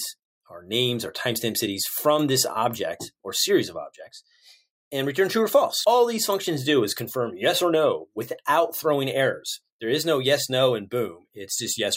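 No technical faults can be heard anywhere in the clip.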